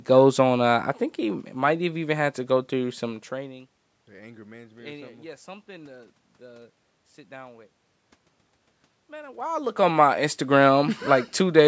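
No technical faults are audible.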